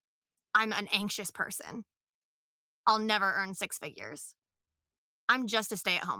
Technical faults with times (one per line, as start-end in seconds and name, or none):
1.01-1.03 lost packet rebuilt from error correction
2.89-2.91 lost packet rebuilt from error correction
4.41-4.69 repeated packet loss (robotic sound)